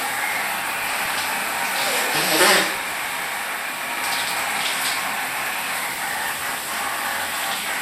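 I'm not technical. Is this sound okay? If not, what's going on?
No. The whole clip sounds dull and plainly gurgly and grainy, as if the top end had been shaved off. That is likely MP2 compression: the file was squeezed too hard, so fine high detail is dropped and what remains sounds rough. It is constant, not bursts.

On top of that there is DAB burbling at 0.81 to 1.20 s, 2.75 to 3.29 s, 5.77 to 6.61 s and 7.40 to 7.61 s. These are brief bursts of noisy blips from reception errors in digital radio. Unlike the steady dullness, they come and go.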